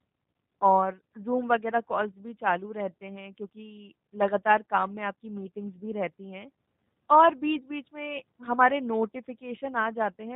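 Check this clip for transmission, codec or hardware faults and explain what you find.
One codec fault runs throughout: G.729 coding, consistent with an 8 kbit/s VoIP link, models the speech as filter, pitch and pulses and discards everything above 4 kHz, leaving it muffled, rough and audibly synthetic.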